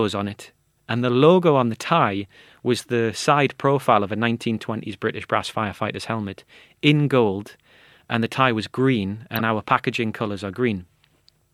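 At 9.36 s, just after "the tie was green" and before "our packaging colours are", a brief squeaky, chirping burst of noise lasts about 50 ms and peaks fairly loud, near -10 dBFS. It is a corrupt frame decoded. Flipped bits in the compressed stream were decoded as though valid, so misread gains and codes put energy at the wrong frequencies. The length points to a handful of consecutive damaged frames.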